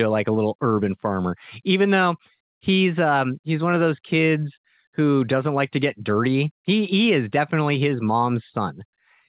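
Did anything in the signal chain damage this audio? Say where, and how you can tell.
No, nothing damaged this audio.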